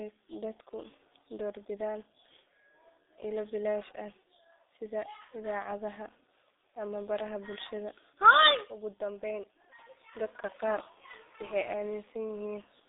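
Throughout, the speech carries heavy G.723.1 codec damage: its slow 30 ms frame model, which fits roughly 6.3 kbit/s, blurs consonants and leaves a muffled, hoarse tone. A spectrogram shows energy confined to 250 Hz–3.7 kHz, with nothing above 3.8 kHz and smeared formants.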